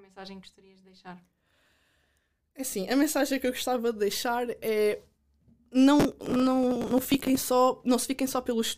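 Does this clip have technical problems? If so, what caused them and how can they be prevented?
Yes: processor overload crackle at 1.39–1.88 s, after "que gostarias de deixar", and at 6.00–7.41 s, where missed deadlines on short buffers of around 5 ms repeat stale audio with hard edges. Prevent it by enlarging the buffer or reducing the CPU load.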